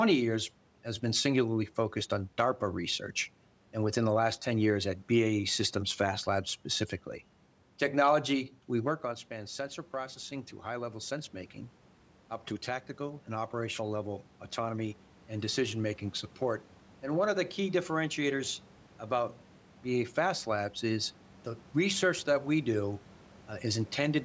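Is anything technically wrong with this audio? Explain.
Yes, there's automatic gain rising. Right after "we work", around 9 s, the talker moves and the level drops by about 12 dB. From 9.02 to 20.74 s, the gain control slowly adds about 9 dB back, so the voice and the room noise swell up together.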